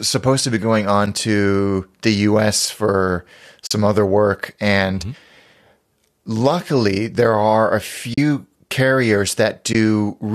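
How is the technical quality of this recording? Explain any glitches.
The recording has three short dropouts where the codec stream lost frames and the decoder muted them.

AAC frame loss with muting: at 3.67–3.71 s, just before "other work and", at 8.14–8.18 s, right after "luckily there are a", and at 9.73–9.75 s, data went missing and the decoder zeroed those frames. Overlapping windows fade the gap in and out, so each sounds like a soft-edged hole lasting about 40, 40 and 20 ms. The audio carries a light grain, likely from low-delay AAC compression at a rate that fits about 64 kbps.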